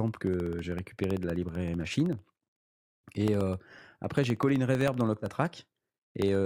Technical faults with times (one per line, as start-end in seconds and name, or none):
0.08-6.35 periodic USB or driver dropouts